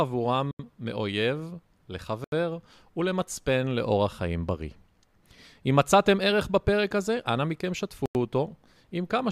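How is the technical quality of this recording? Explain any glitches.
The speech is interrupted by three brief dropouts. At 0.51 to 0.59 s, 2.24 to 2.32 s and 8.06 to 8.15 s, the sound cuts to complete silence for about 80 to 90 ms, likely a Bluetooth stall: wireless interference delayed packets, the headphone buffer emptied, and playback paused until the audio arrived. A codec glitch smears or warbles the sound, but these gaps are clean, dead silence.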